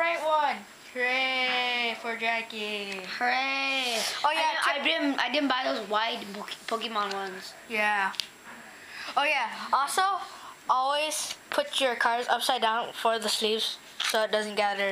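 Nothing in the audio stood out as a technical problem on listening.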